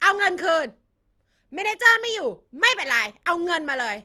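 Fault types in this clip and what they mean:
Generation loss: The speech sounds more swirly, smeared and hollow than a single lossy encode would leave it, with consonant onsets blurred and a watery texture that persists throughout. This is likely repeated decoding and re-encoding, about three passes, each one quantising again on a shifted frame grid so that noise accumulates. The character fits Opus at around 48 kbit/s per pass.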